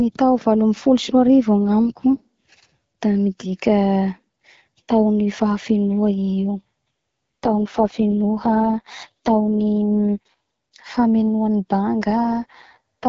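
From 6.58 to 10.34 s, and again from 12.16 s to the end, the speech turns rough, raspy and more synthetic while the bandwidth stays the same and nothing drops out. This is an AMR rate drop. The wideband codec, clear at its normal setting, is told by the network to code speech with far fewer bits, which fits a step down from 12.65 to 6.6 kbit/s, before it returns to the cleaner sound at 10.34 s.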